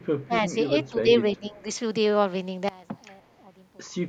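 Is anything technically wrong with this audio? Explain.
Yes, several faults affect this speech clip.

From 0.03 to 0.24 s there is an echo leak, likely from a loudspeaker on the far side whose echo canceller let part of its microphone pickup slip back down the line. The return arrives about 297 ms behind the original speech and sits roughly 35 dB below it, so it is a faint ghost trailing the speech rather than a clear repeat. A second, even weaker scrap of the same echo, around 40 dB down, turns up at 3.30 to 3.36 s.

Four short dips follow, a pattern that points to speech suppressed in double talk. The canceller, facing both sides talking at once, can't tell the local talker from the loudspeaker echo and pulls the level of both down. The talker's speech sags at 0.27 to 0.31 s by about 10 dB, at 0.49 to 0.55 s by about 5 dB, at 0.91 to 1.10 s by about 10 dB, and at 1.36 to 1.65 s by about 15 dB, the last being the deepest and longest gap.

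From 2.69 to 3.87 s one channel appears inverted. With one stereo side flipped in polarity, the material common to both channels cancels when they are folded to mono, and the level drops by 23 dB. The speech and background nearly disappear, leaving only a faint residue of whatever differs between the two channels.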